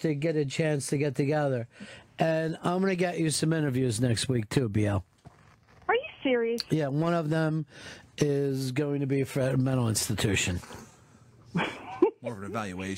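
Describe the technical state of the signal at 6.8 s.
At 6.8 s the signal is intact, with no audible dropout, distortion, clicks or other technical fault at that point.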